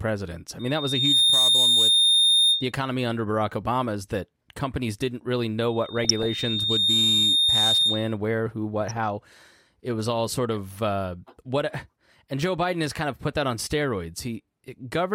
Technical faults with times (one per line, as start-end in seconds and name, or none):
0.59-2.72 loudspeaker feedback squeal
3.51-3.53 DAB burbling
5.68-8.17 loudspeaker feedback squeal
5.92-6.26 DAB burbling
8.81-8.97 DAB burbling